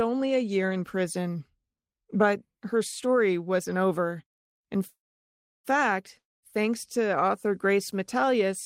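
At 4.87 s a call audio freeze interrupts the speech until 5.67 s. The last sound stretches into a brief fading buzz, then about 0.67 s of silence, most likely because delayed packets emptied the jitter buffer. Speech resumes where it stopped, nothing lost, now about 0.77 s later.

From 6.18 to 6.45 s a long network dropout follows. A short decaying buzz gives way to roughly 0.2 s of silence, and speech returns with about 0.24 s skipped, likely because those packets never arrived in time to be played.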